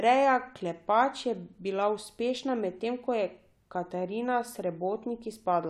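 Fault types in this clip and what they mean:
No faults are audible.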